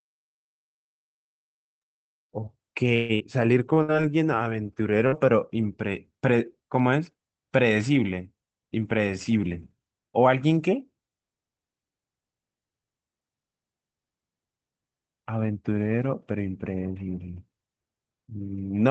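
From 2.95 to 3.23 s, the incoming stream was likely interrupted by a long network dropout. The receiver filled about 244 ms by extending the last sound into a fading buzz or hiss, and roughly 120 ms of speech never plays. When the speech resumes it lands about 70 ms later than before.

At 3.74 to 3.79 s and again at 4.02 to 4.06 s, a short stall from a late packet emptied the jitter buffer. Each time, the receiver held the current sound for 25 ms and then 19 ms with a faint buzzy dip, and the speech continued with nothing lost.

From 3.82 to 3.91 s, a burst of packet loss removed 60 ms of speech. The receiver bridged it with 59 ms of continued sound that grows quieter before the speech picks up further on. From 5.07 to 5.26 s, a second burst lost another 60 ms, which was covered by 52 ms of fading fill. Both gaps sit on the Opus call path, whose coding limits the audio to about 8 kHz.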